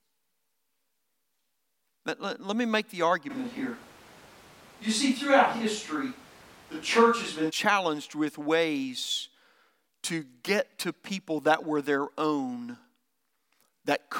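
From 3.32 to 7.49 s, speech turns abruptly roomy and bass-light at unchanged level, noise roughly 25 dB below; likely a switch to a distant microphone.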